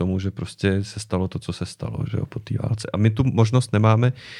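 Nothing here sounds wrong, no dropouts, glitches or distortion anywhere in the recording.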